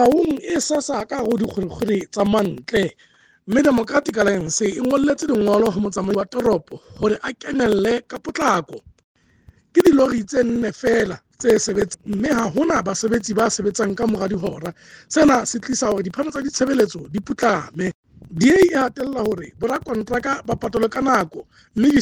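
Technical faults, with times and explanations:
0.06 to 21.97 s: periodic USB or driver dropouts. Roughly every 63 ms, about 1 ms of audio is skipped, several hundred times in all, giving a steady ticking while sound plays. The waveform shows tiny step discontinuities, and the spectrogram shows evenly spaced thin vertical broadband lines.
6.10 to 6.15 s and 11.90 to 11.95 s: damaged data in a compressed stream. Each time the decoder misreads corrupted frames and loses sync for about 45 ms, producing a brief squawk or blip. The spectrogram shows a blocky, smeared burst, and the waveform shows an abrupt discontinuity.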